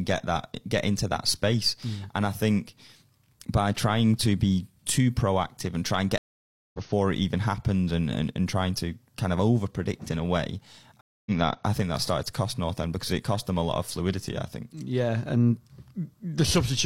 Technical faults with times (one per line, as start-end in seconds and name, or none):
6.18-6.79 stream reconnect
11.01-11.31 stream reconnect